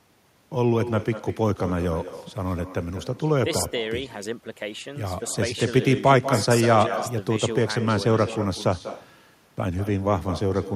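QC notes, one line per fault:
Throughout, echo with no canceller. Every phrase of the speech is followed by a second copy about a fifth of a second later. The copy sits about 13 dB below the direct speech, so it is quieter and thinner. The far end seems to be playing the call on a loudspeaker. Its microphone picks that sound up again. Nothing removes it, so the talker's own voice returns after the network round trip.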